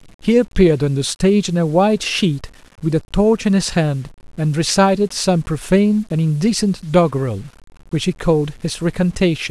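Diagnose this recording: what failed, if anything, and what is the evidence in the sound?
The speech is grainy from start to finish. The grit follows the speech and roughens the quiet syllables. It sits only about 35 dB below the signal. The stage is sample-format conversion, likely low bit depth without dither: 8-bit rounding with no dither, so the error tracks the sound.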